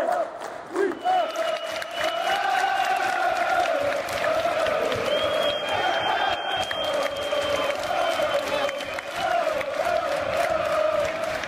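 No technical faults can be heard anywhere in the clip. The audio runs without any interruption, dropout or audible processing problem.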